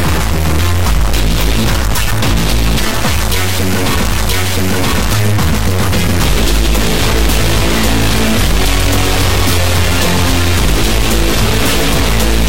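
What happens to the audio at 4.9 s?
At 4.9 s the audio sits inside a stream segment repeated, spanning 4.09 to 5.07 s. The player fetched the same segment twice, so about 0.98 s of sound plays again, with a small blip at the jump back. A spectrogram shows the same block of patterns twice in a row, split by a thin vertical click line.

A stuck bit also runs through this moment and the whole clip. It adds distortion, and quiet gaps fill with noise. The likely cause is one data bit held at a fixed value by a broken line or converter. On the waveform, samples jump by a fixed offset, and the spectrogram shows a broadband haze.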